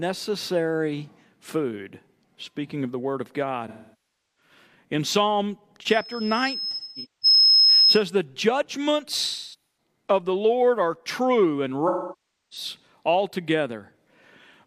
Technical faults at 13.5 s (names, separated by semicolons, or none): none